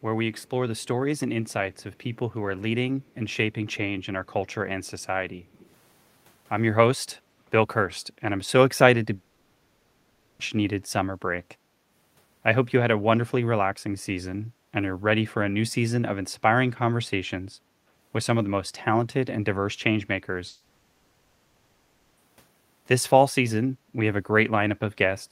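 Between 3.02 and 5.74 s, at 3.02, 4.25, 4.85 and 5.6 s, a faint echo leak follows the speech by 250 ms (279 ms in the last). It is very low, about 40 dB down, rising to about 30 dB at 5.6 s, and is likely residual loudspeaker pickup that the far end's echo canceller missed. From 9.15 to 10.41 s and 20.47 to 22.19 s, a long network dropout, likely lost packets, is filled throughout by a synthetic continuation of the last sound, a fading buzz or hiss. Speech then resumes with about 1.2 s and 1.7 s missing.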